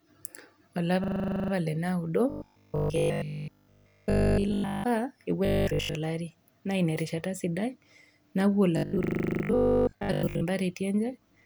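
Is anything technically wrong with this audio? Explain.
Yes. There are two kinds of fault.

System hang loop, 1.04 to 1.52 s (just before "le naudo") and 9.04 to 9.44 s: the system froze while the audio hardware kept replaying a 40 ms buffer, 12 and then 10 times. The result is a 25 Hz machine-gun stutter, with little or nothing actually lost.

Robotic sound from repeated short buffers, 2.30 to 4.84 s (right after "le naudo"), 5.45 to 5.95 s, and 8.77 to 10.45 s: audio likely arrived too seldom, so roughly 20 ms pieces were repeated in place of fresh audio. That imposes a rigid, metallic 50 Hz buzz. Nearly all of the sound is repeats in the first two stretches, and most of it in the third.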